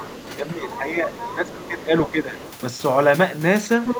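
Other side's voice leaking through, 0.0 to 0.36 s: a second, fainter voice sits about 15 dB beneath the talker. This is likely loudspeaker playback picked up by the microphone that the echo canceller did not fully subtract.

Speech suppressed in double talk, 0.37 to 2.37 s: with both sides talking at once, the canceller likely could not tell the talker from the echo and turned everything down. The voice dips by up to about 10 dB in patches totalling around one and a half seconds.

Within that span, from 1.2 to 1.7 s, the other side leaks through again, about 15 dB down. A short scrap follows at 2.39 to 2.52 s, about 20 dB down. From 3.85 s to the end the leak returns much louder, only about 5 dB below the speech.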